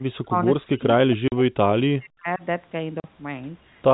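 The echo canceller likely mistook the near talker's speech for its own echo during double talk and turned the near talker down. From 0.25 to 0.46 s the speech sinks by up to about 25 dB. From 0.64 to 2.42 s it fades for roughly a second and a half, dropping by up to about 40 dB.

At 1.28 s and again at 3.00 s, packets went missing and the receiver filled each gap with silence. Each hole lasts 40 ms, which fits two 20 ms packets, and leaves a short gap with hard edges in the speech.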